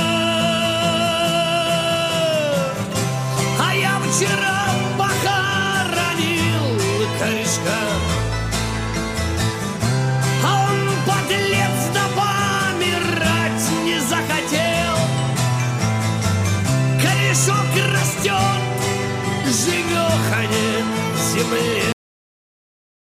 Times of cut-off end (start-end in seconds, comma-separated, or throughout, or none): 21.92-23.16